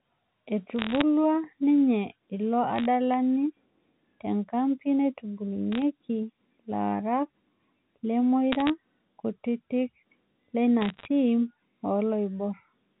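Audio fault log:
0.79–1.01 s, 2.76–2.86 s, 5.72–5.82 s, 8.52–8.70 s, 10.81–11.05 s: bit errors on a digital phone line. Short bursts of sharp ticks and crackle sit over the speech, because a small fraction of bits (well under one percent) were flipped, each error changing a single mu-law sample.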